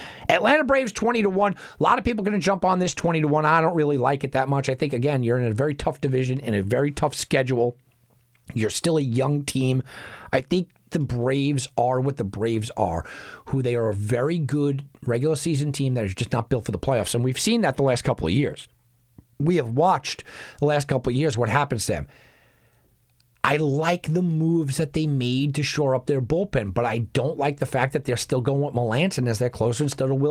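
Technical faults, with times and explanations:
2.83–2.93 s, 2.99–3.09 s, 10.39–10.41 s (after "still a young team"), 19.69–19.75 s, 21.33–21.35 s (after "the last couple of"), 25.39–25.41 s (after "the moves that they"): lost packet rebuilt from error correction. The speech continues without a gap but turns briefly rougher and noisier. The decoder is playing low-bitrate redundant copies carried in following packets, with the longer stretches pointing to runs of two or three lost packets.
2.95–2.99 s: short concealed packet loss. About 20 ms never arrived, so the decoder extrapolated from the preceding sound for roughly 12 ms and then blended back, giving a brief smear between the two rebuilt stretches.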